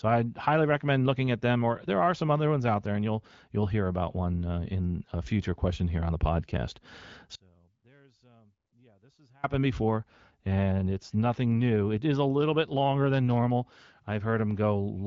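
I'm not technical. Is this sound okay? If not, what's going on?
No. Right after "here on the podcast", at 7.35 s, the speech suddenly shrinks to a faint trace for about 2 seconds, returning at 9.44 s. This is an audio dropout to a faint residue, likely a brief break in the connection.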